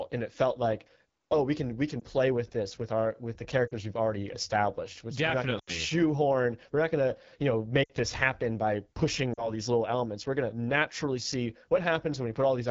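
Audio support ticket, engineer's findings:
AMR wideband (HD Voice) codec at 8.85 kbit/s throughout: second-lowest AMR-WB rate, too few bits for the pulse excitation and vocal tract model. Speech sounds rough and raspy across the whole clip.

Lost AMR speech frames at 2.00 s (20 ms, between "we can we can" and "play with this with"), 3.67 s (40 ms), 5.59 s (80 ms), 7.83 s (60 ms, after "not gonna you know") and 9.33 s (40 ms, before "these little elements"). Failed-checksum frames concealed with repeated parameters and falling gain. Brief warbles and dips; the 80 ms run drops to near silence within two frames before speech returns weak.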